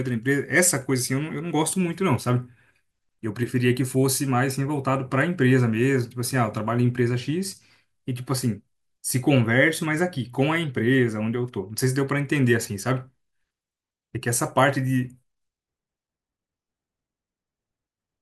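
No technical faults can be heard at any point in this speech recording.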